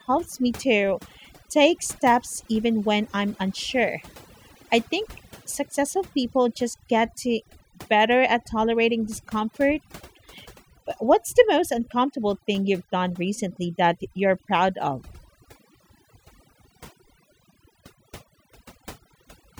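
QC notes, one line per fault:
Throughout: overdone noise removal. The noise reduction was set so strong that whole frequency bands near the noise floor get pulled down or cut, taking the quieter parts of the speech with them. The background drops and breaks up into twinkling specks.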